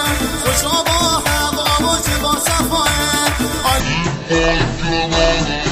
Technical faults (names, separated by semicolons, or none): section at the wrong speed